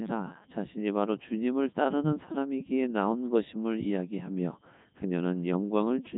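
Throughout the speech, a Codec 2 vocoder has rebuilt the voice from pitch, energy and a spectral envelope rather than keeping the waveform, so it sounds robotic and buzzy. The heavy damage fits the 3.2 kbit/s mode. A spectrogram shows neat, regular harmonics and nothing above 3.8 kHz.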